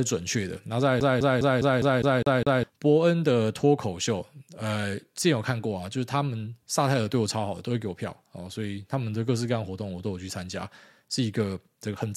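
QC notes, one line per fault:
1.00 to 2.64 s: CD stuck on one turn. The same 0.2 s slice of speech plays eight times in a row, with a brief mute at each jump. A scratch sends the laser back one track at the same point on every rotation, so playback keeps landing on the same spot. The loop length stays fixed, which gives the quick, even stutter of a skipping disc. Normal playback then resumes.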